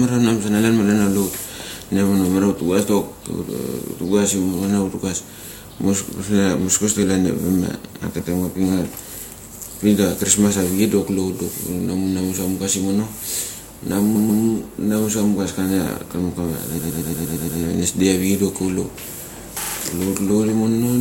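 Runs of compressed frames were delivered more than once, so the decoder replays the same slice of speech as a stutter:

3.57–3.76 s: a 46 ms block repeats four extra times.
8.18–8.30 s: a 116 ms block plays once more.
14.14–14.42 s: a 139 ms block repeats twice, just before "namu sa".
16.77–17.58 s: a 116 ms block loops seven extra times, adding about 0.8 s.
19.61–19.75 s: a 36 ms block repeats three extra times.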